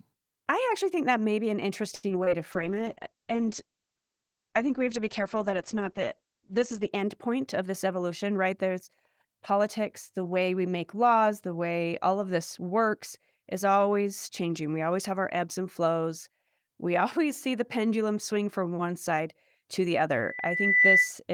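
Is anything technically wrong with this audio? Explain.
Yes, there are several problems, mostly clustered early with one at the very end.

Right after "that may be an", from 1.95 to 2.05 s, there's a short stall from a late packet. The jitter buffer ran dry and the last sound got stretched for about 77 ms, so it hangs briefly.

Two short concealed packet losses follow, at 2.09–2.12 s and 2.24–2.38 s. Roughly 20 ms went missing each time and was patched by extrapolation, giving a quick smear or wobble.

From 2.54 to 6.98 s there's a call bitrate drop from 32 to 9 kbps. The encoder coded coarsely and cut bandwidth from 20 kHz to 8 kHz, so the sound goes muffled and rough.

A jitter buffer speed-up runs from 7.61 to 8.70 s at 108%. About a tenth of a second of pitch periods was trimmed to cut delay, so it sounds hurried at the same pitch.

Finally, after "one side to the", from 20.15 to 21.13 s, there's a loudspeaker feedback squeal. 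A 2 kHz tone builds over roughly 0.7 s to around 10 dB above the signal as the mic–speaker loop runs away.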